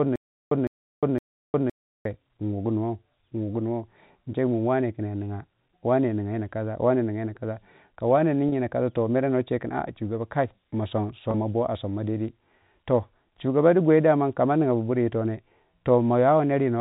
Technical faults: stutter with silent gaps; packet loss with pitch repetition

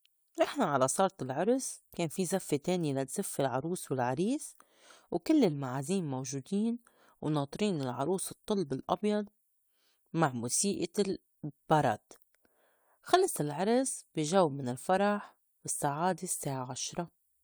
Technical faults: none

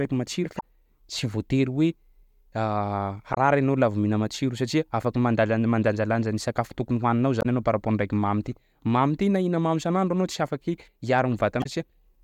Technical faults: damaged data in a compressed stream

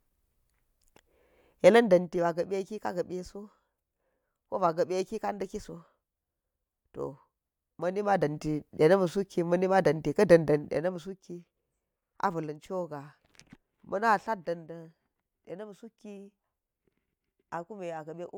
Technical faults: none

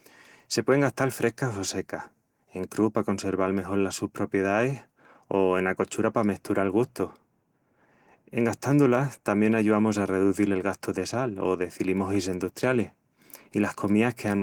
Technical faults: none

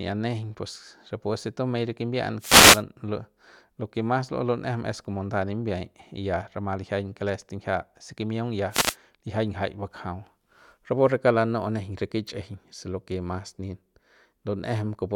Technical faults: wireless microphone noise hit

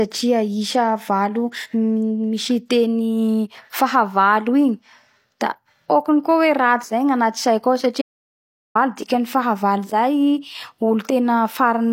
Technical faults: audio dropout to silence

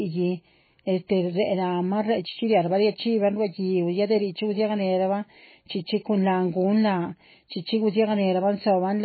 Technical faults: MP3 compression

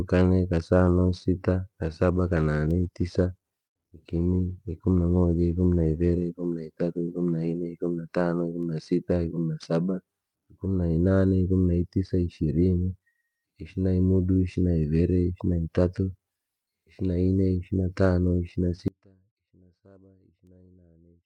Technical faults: call bitrate drop; audio dropout to a faint residue

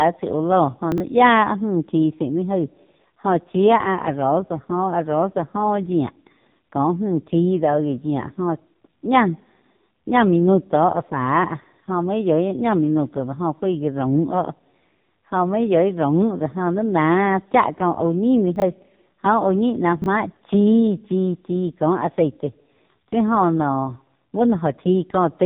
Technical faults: AMR narrowband mobile codec; chunks out of order

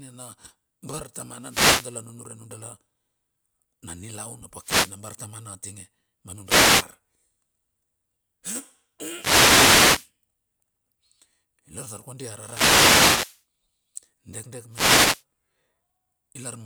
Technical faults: wireless microphone noise hit

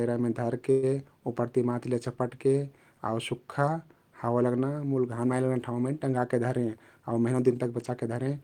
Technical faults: call audio freeze; jitter buffer speed-up

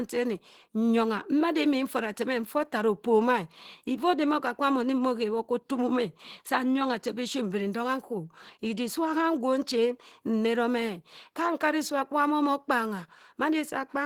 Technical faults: Opus compression

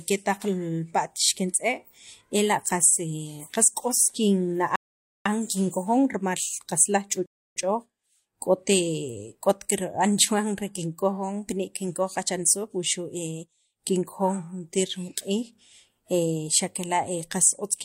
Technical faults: rebuffering stall

